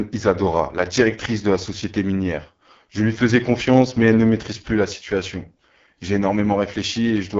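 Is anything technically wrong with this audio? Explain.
Yes. Throughout the speech the sound is rough and raspy, with a buzzy, granular edge and heavy coding damage, and nothing above about 7.4 kHz. This is the AMR wideband (HD Voice) codec running at very low rate, which fits its lowest 6.6 kbit/s mode. Below 6.4 kHz it rebuilds speech from a pulse-excited vocal tract model with too few bits, so detail smears into grit. The top band is filled with shaped noise rather than real content.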